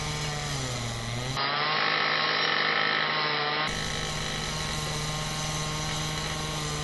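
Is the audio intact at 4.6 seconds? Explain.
No. At 4.6 seconds the sound carries the same damage heard across the whole clip. Nothing reaches above about 11.5 kHz, and the top end has a breathy, grainy texture. The cause is likely Bluetooth LC3 compression. This transform codec works in short frames, here consistent with 10 ms. At a moderate rate, around 48 kbps, it discards much of the upper spectrum and fills the gaps with noise. The damage is plainly audible.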